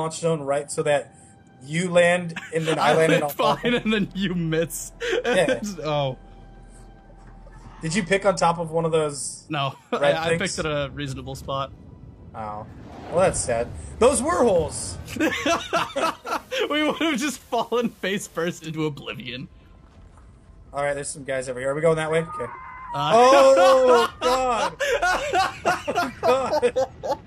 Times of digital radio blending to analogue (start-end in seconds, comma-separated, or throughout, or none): 16.15-18.80